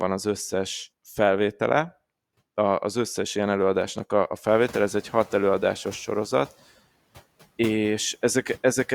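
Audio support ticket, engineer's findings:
Background noise surges through 4.48–5.36 s, then settles. Noise suppressor catching up: room noise jumps about 17 dB around 4.5 s, and the estimate takes 880 ms to adapt, cutting about 5 dB.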